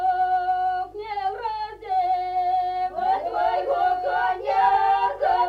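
Nothing stood out as a technical fault on listening to this clip.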